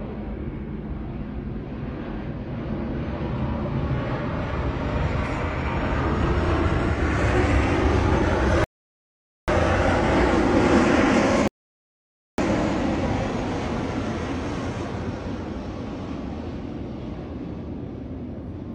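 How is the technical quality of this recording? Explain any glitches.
Two rebuffering stalls interrupt it. At 8.64 to 9.48 s and again at 11.48 to 12.38 s, the player ran dry of downloaded audio and paused until more arrived. You get roughly 0.84 s and 0.91 s of dead silence, then the audio picks up exactly where it stopped, with nothing skipped.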